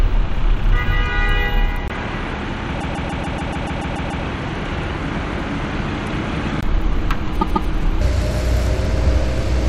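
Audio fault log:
1.88–6.63 s, likely input switched to a poorer device: after a 20 ms gap the sound turns dull and about 5 dB quieter, with a new noise floor roughly 35 dB below it. On a spectrogram the upper frequencies are suddenly empty, with a thin blank column at the switch.
2.80–4.24 s and 7.41–7.69 s, repeated frames: the same 144 ms block plays again and again, ten extra times in the first run (adding 1.44 s) and twice in the second (adding 288 ms). This is heard as a stutter. The waveform and spectrogram show identical repeating 144 ms tiles.
8.01 s to end, section at the wrong speed: the last part runs 1.85 times too fast, likely from playback against the wrong clock. The sound is hurried and about ten semitones higher. On a spectrogram every harmonic jumps upward and events are squeezed closer together.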